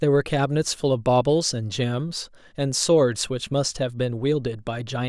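No technical faults are audible anywhere in the recording.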